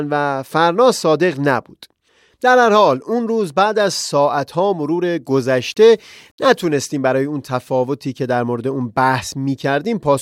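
From 5.29 to 6.79 s the speech turns grainy, with a gritty distortion that tracks the signal, roughly 45 dB down. This is likely low bit depth without dither, consistent with rounding to 10 bits.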